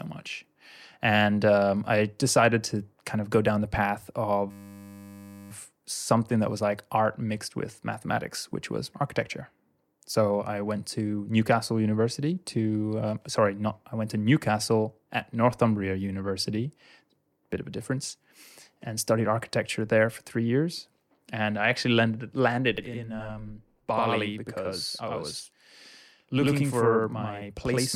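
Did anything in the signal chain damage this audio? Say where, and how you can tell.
Yes. A system hang loop runs from 4.51 to 5.51 s, just before "something that was like". A 10 ms slice repeats exactly about 100 times, heard as a steady 100 Hz buzz. The driver or buffer stage froze while the hardware kept replaying its ring buffer, and little or no speech is lost.

A channel delay (doubling) starts at 22.78 s, right after "I actually landed landed", and lasts to the end. The speech has a same-level slap copy 85.33 ms late, which fits a 4096-sample buffer. One channel lagged at the driver or buffer stage before both were summed to mono.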